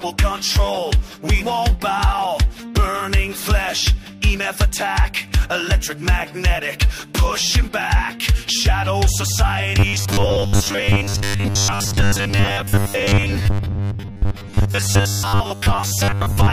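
From 9.79 s to 16.52 s the sound becomes a rigid, metallic buzz fixed at 100 Hz. This is robotic sound from repeated short buffers, likely caused by audio arriving too seldom. The gaps are filled by replaying roughly 10 ms slices in place of about 70 percent of the real signal.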